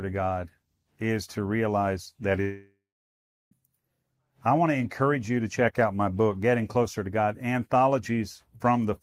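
A long network dropout runs from 2.41 to 3.60 s, right after "is to realize that" in this speech. The likely cause is about 1.1 s of audio never reaching the receiver. The last sound is stretched into a fading buzz, and roughly 0.73 s of near-silence follows. The speech then resumes with the lost stretch simply gone rather than delayed.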